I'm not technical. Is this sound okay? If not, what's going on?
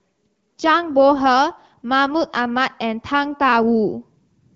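Yes, this speech sounds fine: nothing has gone wrong with it, and the only thing you might notice is the slightly narrow, phone-call quality that comes from it travelling over an HD Voice call, which is normal.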